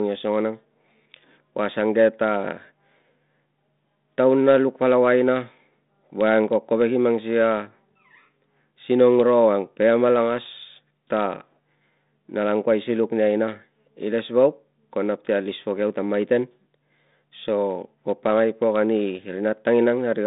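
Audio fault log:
No faults in this audio fault log.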